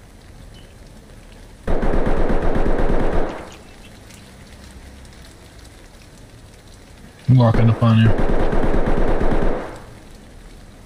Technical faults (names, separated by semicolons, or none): none